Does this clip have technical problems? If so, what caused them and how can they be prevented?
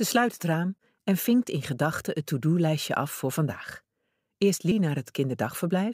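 Yes. Compressed frames are skipped at 4.72 s. The audio jumps ahead about a tenth of a second, consistent with one dropped 92.9 ms frame. Checksum files and re-copy damaged ones before decoding.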